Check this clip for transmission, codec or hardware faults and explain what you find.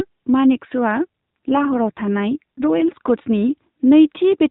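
One codec fault is present in this narrowband mobile speech. From 1.07 to 3.11 s there is an AMR rate drop. The network pushed the AMR-NB codec down to a lower mode, which fits a fall from 12.2 kbps to around 5.9 kbps. Fewer bits went to the vocal-tract model and more to error protection, so the voice turns buzzier and more synthetic without any gap. On a spectrogram the 4 kHz ceiling stays put, but harmonics look smeared and grainier. The waveform stays continuous.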